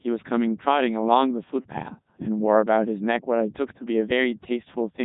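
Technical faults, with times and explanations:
Throughout, Codec 2 vocoder: the speech was carried by a very low-rate vocoder that transmits only pitch, voicing, loudness and a coarse spectral envelope, and the decoder rebuilds the voice from sine waves instead of the original waveform. The damage is heavy. The speech comes out robotic and buzzy, with nothing above 3.8 kHz, which fits Codec 2 running at its highest 3.2 kbit/s mode.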